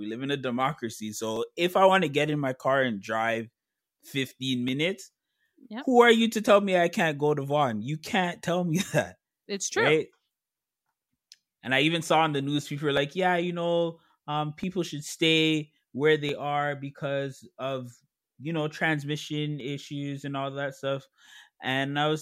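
Speech with clock drift buffer slips: from 1.36 to 21.26 s, just after "live in a democracy", clicks recur every 1.66 s. Their even spacing sets them apart from random dropouts, and they likely come from two device clocks running a few hundred ppm apart.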